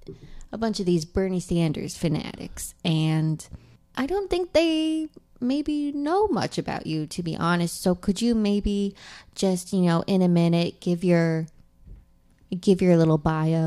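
No technical faults can be heard anywhere in this speech recording, and the signal stays continuous and steady throughout.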